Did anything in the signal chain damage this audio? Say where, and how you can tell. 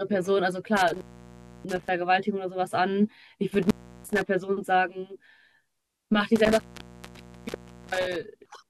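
Yes. The damage is in the analogue wiring, an intermittent contact. The speech drops out three times, from 0.77 to 1.89 s, 3.54 to 4.22 s, and 6.36 to 8.16 s. Each event has crackle at its edges. The line stays open for about 0.64 s, 0.34 s and 1.32 s, leaving faint hiss. A loose plug or cable is briefly breaking the circuit. The scratchy transitions are the contact reconnecting.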